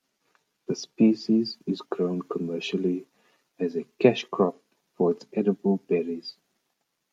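Nothing goes wrong anywhere in this recording of speech; there's simply nothing here to flag.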